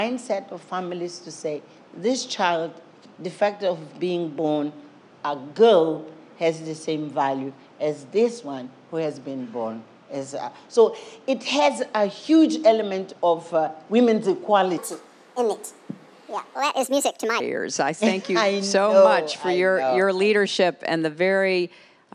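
From 14.78 to 17.4 s there is a wrong sample rate fault. The sound runs 1.45 times too fast and about 6.45 semitones too high, which fits 22 kHz material played at 32 kHz. A spectrogram shows every component shifted upward, and the waveform looks compressed in time.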